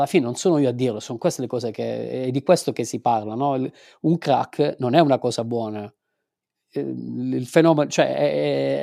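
A speech recording, with nothing technically wrong with it.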